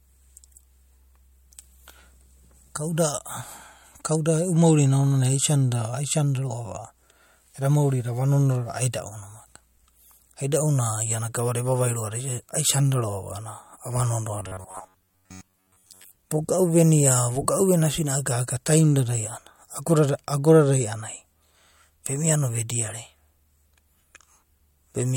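Right from the start, nothing sits above about 16.7 kHz: low-bitrate audio saved at a high bitrate, likely a 64 kbit/s-style MP3 re-encoded larger, keeping the original smearing. From 14.40 to 16.16 s the speech turns into a rigid metallic buzz at 93.8 Hz. That's robotic sound from repeated short buffers, likely a roughly 10.7 ms chunk looping over most of that stretch.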